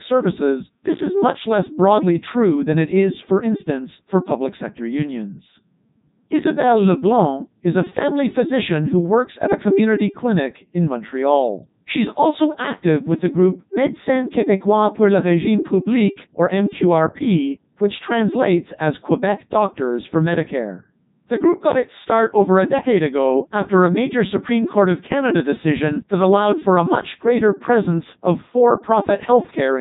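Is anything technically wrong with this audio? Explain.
Yes. Throughout the speech, the audio has passed through the Codec 2 vocoder. The damage is heavy and fits a 3.2 kbit/s rate. Only pitch, voicing, energy and spectral shape survive. Sine-wave resynthesis makes it robotic and buzzy, with nothing above 3.8 kHz.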